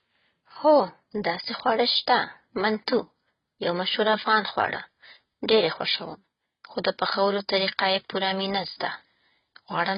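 From the start, the speech is dull and smeared, with a warbling, fizzy edge on sibilants, the heavy damage of what is likely AAC compression at a bitrate that points to around 16 kbps. On a spectrogram everything above 5.1 kHz is empty.

From 0.11 s to 9.93 s, faint regular ticks fall about every 70 ms, around a hundred in all, clearest under louder sustained sounds. These are clock slip clicks, likely from two unsynchronised clocks differing by roughly 300 ppm, so a single sample is dropped or repeated each time. The waveform shows tiny evenly spaced discontinuities, and the spectrogram shows faint vertical lines at a steady spacing.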